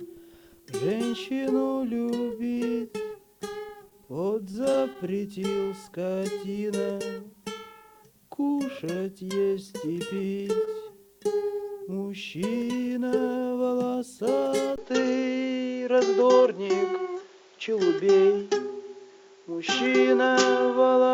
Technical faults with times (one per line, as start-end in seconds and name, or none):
3.89-3.93 short stall from a late packet
4.51-4.75 short concealed packet loss
4.93-4.97 short stall from a late packet
10.65-10.69 short stall from a late packet
14.76-21.13 input switched to a poorer device